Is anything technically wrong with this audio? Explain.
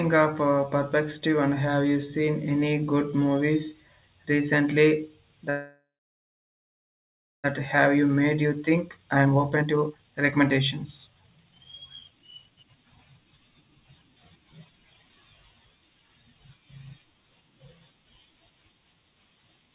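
Yes. There are two kinds of fault, a freeze followed by two stretches of hurried playback, all heard over narrowband call audio with nothing above 4 kHz, which fits a G.711 mu-law path.

From 5.5 to 7.46 s, right after "any good movies recently", the speech stops. The last sound lingers briefly as a fading buzz and then gives way to about 1.56 s of silence. When the speech resumes, it carries on exactly where it left off, with nothing lost. This is a call audio freeze, likely caused by packets stalling in transit until the jitter buffer ran dry. The receiver stretched the final sound to cover the wait, which inserted roughly 1.94 s of gap and delay.

From 7.94 to 11.65 s the speech sounds rushed, running at about 133% speed while the pitch stays the same. A second, milder stretch follows from 12.08 to 15.17 s at about 122%. This is jitter buffer speed-up. After the stall, the delayed audio arrived in a bunch and the buffer held more than it wanted. 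To work off the excess delay, the receiver repeatedly cut out short pitch-period-sized pieces, removing roughly one and a half seconds in the first stretch and under a second in the second.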